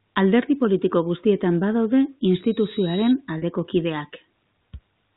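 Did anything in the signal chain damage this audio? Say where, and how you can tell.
Yes. A loudspeaker feedback squeal runs from 2.26 to 3.15 s, just after "politiko guztietan badaude". This happened in the acoustic loop between microphone and loudspeaker, upstream of the codec. A single tone at 3.8 kHz swells over roughly three quarters of a second until it sits a few dB above the speech. At that frequency the microphone was re-amplifying the loudspeaker's output with a loop gain above one, so the tone kept feeding itself. It survived the telephone coding because it lies just under the 4 kHz band edge.

Packet loss with pitch repetition occurs at 3.38 to 3.42 s, in the network stage. A 40 ms gap, which fits two lost 20 ms packets, was filled by the receiver looping the last pitch period of the speech. Because the gap is this short, it is heard as a brief held, slightly buzzy sound rather than a dropout to silence.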